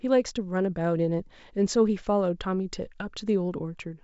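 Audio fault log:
No faults heard; wideband telephone coding sounds as expected.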